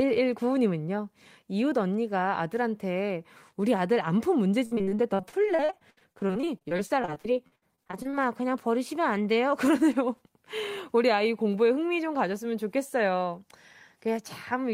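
Speech that turns choppy and robotic from 4.65 to 8.15 s, with dozens of brief holes, the longest about 62 ms. This is repeated packet loss: the decoder papered over missing stretches by stretching the preceding sound, concealing about 28% of that span.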